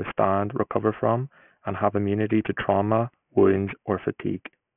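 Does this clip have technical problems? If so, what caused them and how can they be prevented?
Yes. Aliasing runs through the whole speech clip. The spectrum stops hard at 3 kHz, which fits a drop to a 6 kHz sample rate. The rate was lowered without an anti-aliasing filter first. Energy above 3 kHz folded back below it onto wrong, unrelated frequencies. Sibilants sound gritty and metallic. The folded energy sits roughly 20 dB under the speech. To prevent it, low-pass filter below the new half-rate before resampling.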